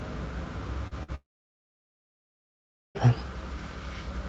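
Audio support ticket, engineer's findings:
Short concealed packet loss, 0.87 to 0.94 s: quick smear in the sound. Around 40 ms never got to the decoder in time, so the receiver kept the previous sound going and blended back in.

Burst of packet loss, 1.03 to 1.11 s: another gap of about 40 ms, this time bridged by roughly 50 ms of the last sound carried on and faded down. Playback then picks up a touch further on, with about 11 ms skipped.

Long network dropout, 1.15 to 2.98 s: the last sound stretches briefly, fades out, then about 1.7 s of silence before the audio returns further along, with the whole stretch missing. Likely cause is the network stalling completely. The top end sits at 8 kHz, which fits Opus wideband on the call path at something like 48 kbps.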